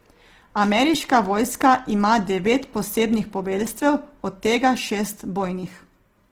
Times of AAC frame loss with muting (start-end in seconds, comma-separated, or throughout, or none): none